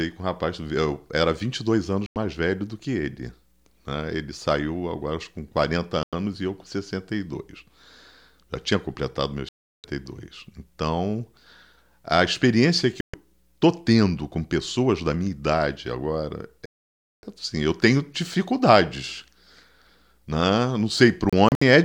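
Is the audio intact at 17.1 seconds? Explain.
No, 17.1 seconds falls inside a digital broadcast dropout from 16.66 to 17.24 s, right after "da minha idade agora" and before "assim eu tenho dificuldades". The receiver stopped getting decodable frames and muted its output, so the speech drops to clean silence for about 0.58 s and then resumes. Whatever was said in that gap is gone. This differs from concealment or an analogue fade because there is no smeared, repeated or noisy fill, just a hard digital hole.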